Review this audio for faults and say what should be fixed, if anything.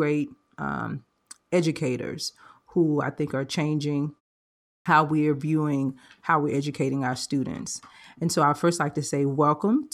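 Clipped start after a pause at 4.82 to 4.86 s: after a silent gap of 0.7 s, the output path had gone idle and needed time to wake and resynchronise before passing audio again. The first 36 ms of the returning speech were swallowed during that recovery, so the sound begins abruptly, missing its opening. To prevent the clipped start, keep the output device active through silence, or feed it a low-level signal so it never sleeps.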